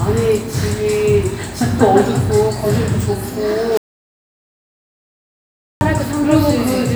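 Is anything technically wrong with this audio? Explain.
Yes. There is an audio dropout to silence from 3.77 s to 5.81 s. The sound cuts off abruptly and returns just as abruptly about 2 s later. The gap is silent, with no background hiss or room tone at all. That points to the input signal being lost while recording carried on, likely from a disconnected device, a failed link or an accidental mute. Whatever sounded during those two seconds is gone.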